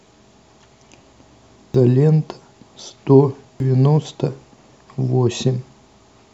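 At 1.74, 3.60 and 5.92 s, damaged data in a compressed stream makes the decoder lose sync, giving a short glitch at each point.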